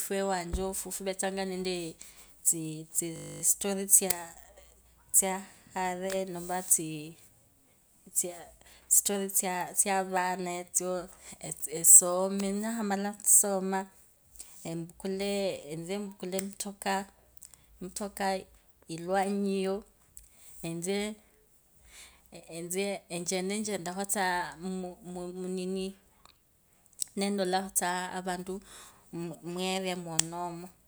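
From 3.16 to 3.42 s the speech stops into a system hang loop: the system froze while the hardware replayed one 20 ms buffer about 13 times. It sounds like a 50 Hz buzz. The waveform shows identical 20 ms cycles, and the spectrogram shows harmonics spaced 50 Hz apart.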